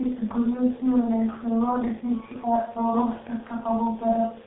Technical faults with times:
0.00-4.46 G.723.1 codec

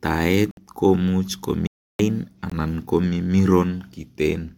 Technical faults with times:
0.51-0.57 Bluetooth dropout
1.67-1.99 playback stall
2.50-2.52 Bluetooth dropout

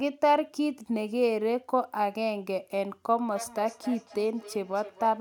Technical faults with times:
3.14-5.21 feedback echo between two devices

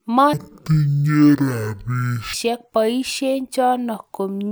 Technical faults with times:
0.33-2.33 stereo read as mono

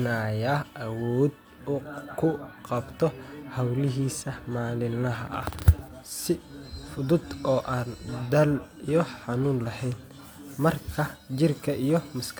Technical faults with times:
none

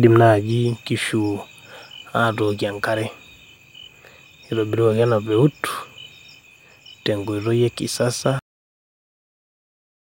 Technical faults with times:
8.39-10.05 cut-off end

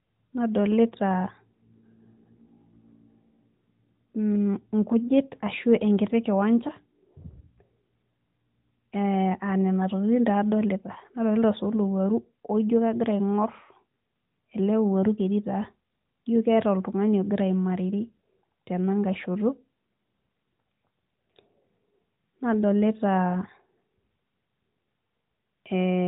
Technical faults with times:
none

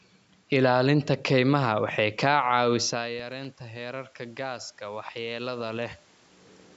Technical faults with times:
3.07-3.45 CD scratch ticks

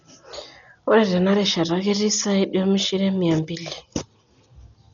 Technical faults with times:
0.00-4.93 Dolby Digital compression

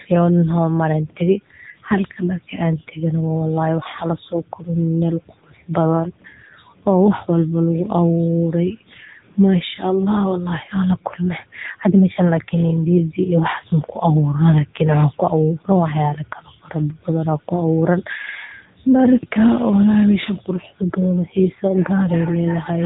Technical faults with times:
0.00-22.86 AMR narrowband mobile codec

